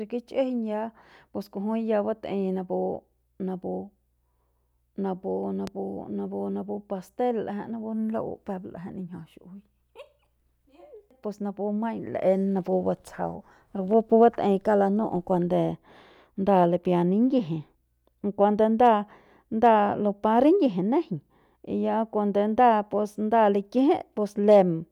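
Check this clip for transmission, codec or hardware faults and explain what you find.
One fault is present, a loud pop. A sudden voltage pulse, likely from a plug, switch, static discharge or driver glitch, entered the signal chain at 5.67 to 5.70 s. It sounds like a single sharp pop, well above the speech level, with the speech continuing underneath.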